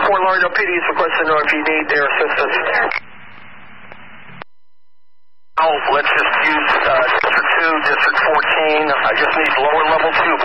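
A stream likely dropped a fraction of a millisecond of samples at 5.44 and 9.46 s, making the waveform jump and leaving a single sharp click each time.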